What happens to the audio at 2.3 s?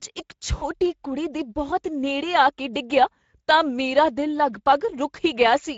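At 2.3 s the speech carries Speex codec damage, present throughout the clip: starved excitation coding makes it hoarse and noisy, with smeared, grainy harmonics on a spectrogram, consistent with roughly 16.8 kbps.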